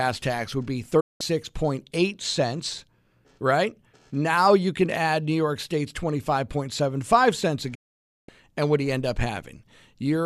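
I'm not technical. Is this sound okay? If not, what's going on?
No. The speech has two digital broadcast dropouts: the receiver lost the signal and muted, cutting sound at 1.00–1.21 s and 7.75–8.29 s. What was said there is gone.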